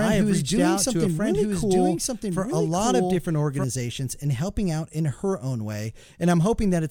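From the very start until 3.64 s, a doubled audio track runs beneath the sound: a second full-band copy trails the original by about a second, roughly 5 dB quieter. This is likely the same signal captured again through a slower path or left out of step in an edit. Unlike an echo or reverb, the copy has no decay, no room colouring and no further repeats, and it cuts off abruptly at 3.64 s.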